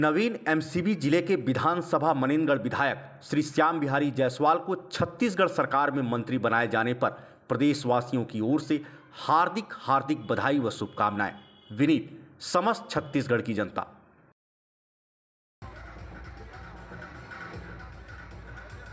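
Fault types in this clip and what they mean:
No audible faults present.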